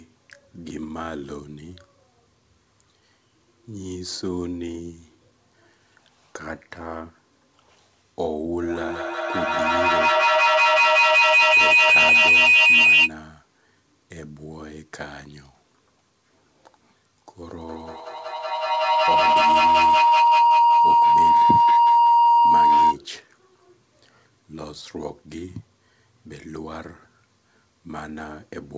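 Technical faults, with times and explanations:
8.62 to 13.15 s and 17.67 to 23.00 s, feedback howl: two devices on the same call in one room form a loop in which each pass from microphone to loudspeaker and back comes out louder, so the sound swells into a sustained tone instead of dying away. The first builds near 3 kHz and the second near 1 kHz, each peaking at about 15 dB and 14 dB above the speech and pulsing roughly every 200 ms, the loop's round trip. Unlike an echo, whose repeats fade, these grow and narrow to one pitch until the loop breaks. Through this call path, which passes nothing above 8 kHz as a 64 kbps G.722 link would, the tone stays clearly audible.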